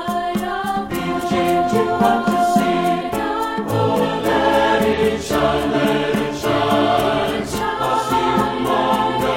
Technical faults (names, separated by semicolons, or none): compressed frames skipped